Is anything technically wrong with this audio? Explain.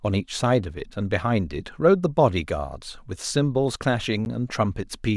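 Yes. A block of digital silence at 4.25 s: about 10 ms of the speech drops abruptly to silence and back with no fade, so the two hard edges sound as a brief tick.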